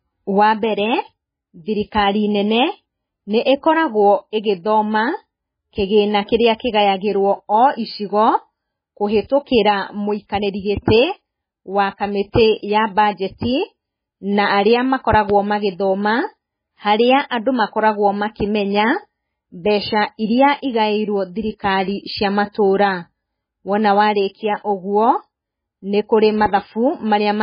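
Throughout, the speech sounds watery and swirly, with nothing above 5 kHz. This is heavy damage from MP3 compression, likely at a very low bitrate near 16 kbps. At 15.13 s and again at 26.46 s, a loud pop breaks through as two quick pops, roughly 10 dB above the speech, likely from a sudden voltage pulse.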